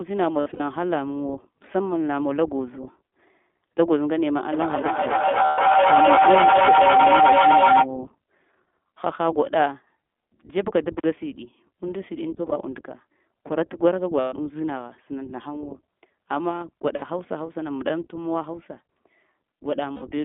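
The whole recording passes through the iLBC codec. The line band runs from about 200 Hz to 3.5 kHz, so nothing above that reaches the ear. The speech sounds thin, rough and somewhat synthetic, and the coding damage is plainly audible. The 20 ms framing and that band fit the 15.2 kbps mode. Each frame codes its own excitation without relying on the frame before.

The first lost iLBC frames fall at 0.40 to 0.62 s. About 140 ms of audio is missing, spread over 200 ms, and the longest gap is around 70 ms. The decoder fills each hole by repeating the last pitch cycle with added noise. It sounds like a brief held, buzzy vowel. Because frames stand alone, clean speech returns almost at once.

From 4.52 to 7.9 s a feedback howl builds. Two devices on the same call share a room. Each pass through microphone and loudspeaker adds gain, so the repeats grow instead of dying away. They narrow to a tone near 700 Hz that pulses roughly every third of a second. 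At its peak it is about 7 dB louder than the speech.

Inside the howl, at 5.46 to 5.60 s, another 120 ms of frames drops out with the same buzzy fill.

At 10.98 to 11.04 s an intermittent contact opens for 44 ms. The sound cuts out abruptly, with a crackle at each edge and faint hiss in the gap. That suggests a loose plug or cable.

More lost frames follow at 12.36 to 12.58 s, with 100 ms missing in short gaps of about 20 ms. Then come 14.20 to 14.34 s with 120 ms missing, 16.96 to 17.04 s with 60 ms, and 19.92 to 20.04 s with about 100 ms. Each brings the same brief synthetic held tone before speech recovers.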